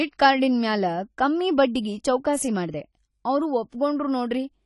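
AAC compression runs from start to finish: the speech is dull and smeared, with nothing above 11.4 kHz and a plainly audible watery, fizzy texture on sibilants and held vowels. The damage is likely from AAC-LC coding at a low bitrate, which fits something near 32 kbps. With too few bits, the encoder lowers its cut-off and quantises the remaining frequency lines coarsely, so fine detail is lost.

Pre-echo appears from 3.70 to 3.73 s, right after "ಚೌಕಾಸಿ ಮಾಡ್ದೆ ಅವ್ರು": a short hiss of about 28 ms runs ahead of the next sharp onset, which sounds softened. The transform codec spreads quantisation noise across its whole block. Because this attack lands late in a block, noise sized for the loud onset also fills the quiet gap before it and becomes audible as a smear leading into the attack.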